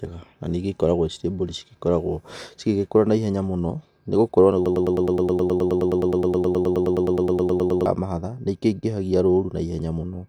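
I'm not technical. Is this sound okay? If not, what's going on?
No, there's a hiccup. From about 4.66 to 7.86 seconds the speech gets stuck in a broken-record loop: a tiny slice, roughly a tenth of a second long, plays over and over, back to back, about 30 times, so you hear a fast stutter instead of talking. What's likely happening is that the player or stream stalled and kept replaying the last bit it had, so whatever was said in those three seconds is simply gone.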